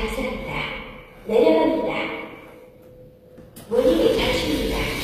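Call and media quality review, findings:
HE-AAC compression, whole clip. Treble gritty and metallic, not matching the lower band; nothing above 14.9 kHz. Likely HE-AAC at a low rate, near 24 kbps: spectral band replication copying lower bands upward under a coarse envelope, harmonics misaligned at the crossover.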